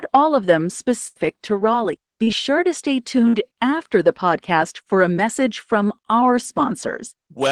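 At 1.07 to 1.17 s, just after "all of them", a burst of packet loss leaves about 80 ms that the receiver covers by extending and fading the last sound, heard as a held, dying tail before the audio resumes with that stretch gone. At 2.23 to 2.29 s, just before "sure to stay", a short concealed packet loss drops about 40 ms, and the receiver's continuation blends back in as a brief smear. At 3.29 to 3.35 s, between "sure to stay" and "after the podcast for", a second burst of packet loss loses about 40 ms, heard as a short fading carry-over before the sound picks up.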